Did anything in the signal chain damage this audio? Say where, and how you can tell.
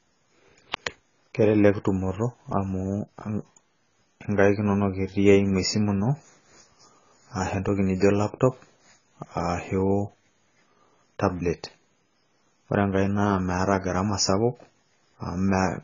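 Yes. The damage sits at the codec stage and runs through the whole recording. The speech is dull and smeared, and nothing reaches above 7 kHz. Sibilants turn fizzy and sustained sounds warble. This points to AAC compression, likely AAC-LC at a very low bitrate, around 16 kbps. At that rate the encoder lowers its cut-off and spends too few bits on each frame. Gaps open in the spectrum, and the heavy artefacts follow.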